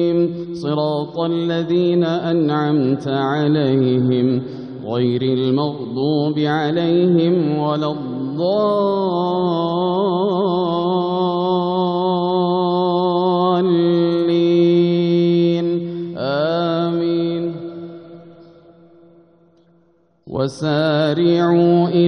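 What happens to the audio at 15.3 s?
Nothing goes wrong at 15.3 s: the audio plays through that moment intact, with no dropout, glitch or other fault.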